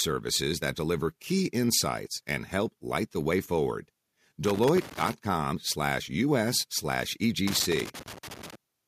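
A worn or dirty connector in the signal path is making and breaking contact in this speech clip. The result is loose connector crackle: the signal is chopped into an irregular burst of scratchy crackle from 4.45 to 5.13 s and again from 7.47 to 8.55 s.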